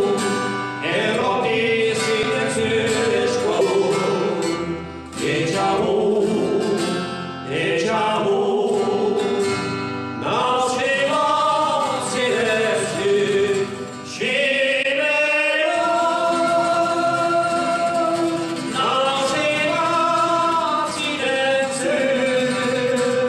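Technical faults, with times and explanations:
2.23 s, 3.58–3.62 s and 14.82–14.86 s, compressed frames skipped: the audio jumps forward three times, losing roughly 50 ms at 2.23 s and 14.82 s and about 150 ms at 3.58 s. Whole coded frames never reach the output, either missing from the stream or rejected by the decoder as damaged, so playback leaps ahead by a multiple of the frame length.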